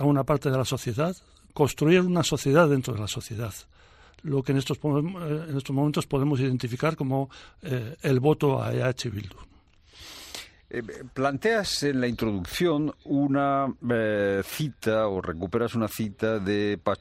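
No technical faults can be heard anywhere in this audio.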